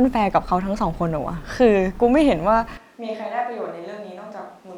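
At 2.77 s the speech suddenly turns roomy and hollow, with thinner bass. It stays that way to the end. The level falls by about 10 dB. Room noise rises to around 30 dB below the speech. This is likely a switch to a distant microphone.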